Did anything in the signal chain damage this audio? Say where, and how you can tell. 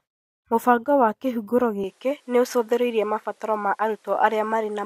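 Yes. The input was likely switched to a poorer device at the driver level, at 1.84 s, with no gap at the switch. From there to the end, nothing is heard above 13 kHz, the level shifts by around 5 dB, and a new noise floor appears roughly 40 dB below the speech.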